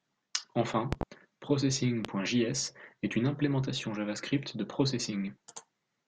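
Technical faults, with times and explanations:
0.93–1.05 s, loud pop: a double pop, around 20 dB above the speech, which carries on underneath. This is likely an electrical pulse from a switch, plug or static.
2.05–2.08 s, loud pop: a single sharp thump of similar level, again with the speech uninterrupted, unlike a dropout or edit click.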